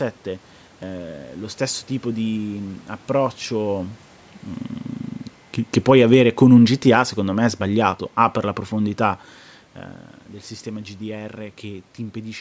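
From 5.74 s to 9.33 s there is automatic gain falling. The call's gain control judged the input too loud or its background noise too strong and gradually lowered its gain by about 5 dB. Unlike a talker moving back, the room noise sinks along with the speech.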